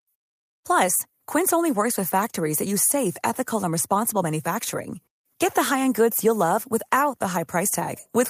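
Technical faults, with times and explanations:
No technical faults are detectable in this speech recording.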